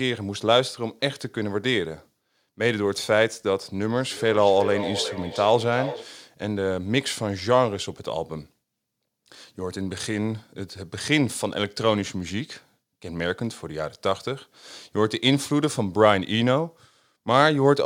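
From 3.97 to 6.17 s the speech has a feedback echo between two devices. Each phrase comes back about every 0.4 s. The loudest repeat sits about 10 dB below the direct speech. Two devices in the same room are on one call. One plays what the other's microphone sent. That microphone hears it again and sends it back. Each echo canceller only removes its own device's playback, so this loop survives. The repeats sound thinner and more ringing.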